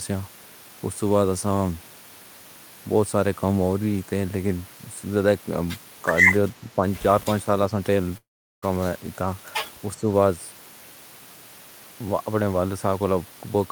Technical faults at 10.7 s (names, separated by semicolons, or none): none